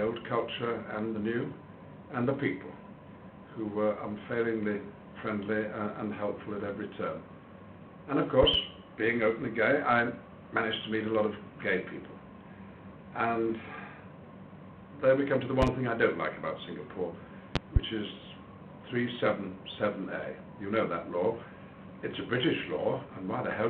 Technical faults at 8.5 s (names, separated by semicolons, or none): loud pop